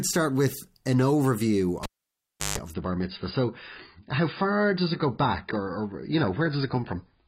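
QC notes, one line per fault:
1.83–2.58 s, cable pulled and plugged in: a pop, about 0.70 s of near silence, a 0.16 s burst of 50 Hz mains buzz, then a pop as the connection returns.
2.74–7.28 s, adaptive stream at a lower bitrate: sudden dull, artefact-laden sound with nothing above 5 kHz and no gap, which points to a switch from about 96 to 16 kbit/s AAC.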